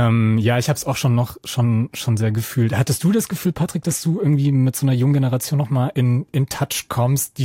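From 1.80 to 4.73 s the speech carries crude rate conversion. Samples were linearly interpolated without a proper filter, which fits a 48 kHz to 44.1 kHz change. The leftover error sits around 30 dB below the speech. It adds a gritty, inharmonic fizz.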